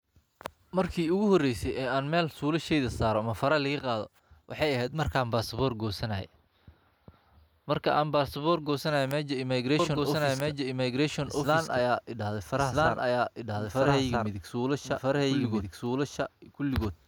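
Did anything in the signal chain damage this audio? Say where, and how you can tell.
Yes. A doubled audio track starts at 9.79 s and runs to the end. The speech is likely being picked up a second time by a slower capture path, or an edit left two copies out of step. From 9.79 s a second full-band copy trails the original by about one and a half seconds, at roughly the same level. It has no decay or room colour, and it cuts in abruptly rather than building up like an echo.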